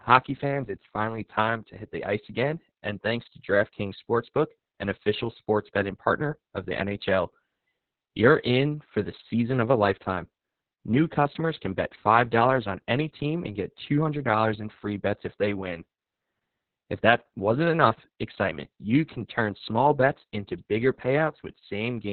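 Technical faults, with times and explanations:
Throughout, Opus voice compression: the speech sounds muffled and boxy, with a hoarse, buzzy edge and a faintly robotic quality. Everything above about 4 kHz is gone, and the crisp consonants go dull with it. The audio points to Opus running its SILK linear-prediction coder at around 6 kbps in narrowband mode with long 60 ms frames. At that rate the excitation signal is coded very coarsely, and that coarse coding is what causes the roughness.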